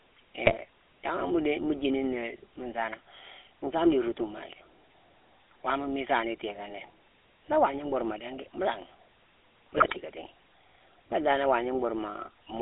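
A buzzy, gravelly roughness colours the speech from start to finish, with nothing heard above about 3.4 kHz. That is GSM full-rate codec damage: the vocal tract is modelled and driven by sparse, regular pulses, which fits the 13 kbps full-rate coder squeezed into a narrow phone band.

From 0.44 to 0.55 s, and again from 9.76 to 9.97 s, the speech breaks into squawks, pops and gargling. These are GSM bit errors: corrupted filter, pitch or gain values warp the spectrum or level frame by frame. The second burst is longer and harsher, pointing to roughly ten damaged frames against about five in the first.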